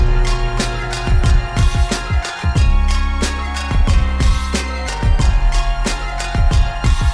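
No technical faults can be heard anywhere in the audio.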